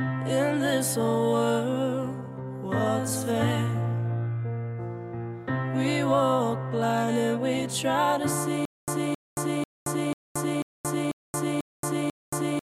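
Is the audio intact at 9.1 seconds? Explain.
No. From 8.65 s to the end of the clip, playback has likely stalled and keeps retrying, a stutter with silent gaps. Each retry replays the same 267 ms fragment, then runs dry for about 226 ms of dead silence, so the burst returns every 492 ms, eight times in a row. At 9.1 s you hear that looping fragment or the empty gap between repeats. The audio that belonged there is lost, not delayed.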